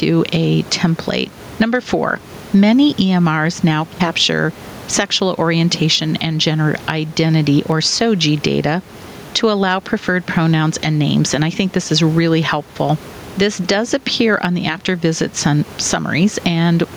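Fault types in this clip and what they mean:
Gain pumping: the level ducks around 10 dB under loud speech, likely a fast limiter reacting to gain set too high.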